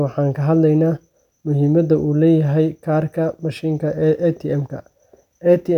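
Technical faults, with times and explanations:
No technical fault can be heard in this speech recording. There is nothing here to time or to explain.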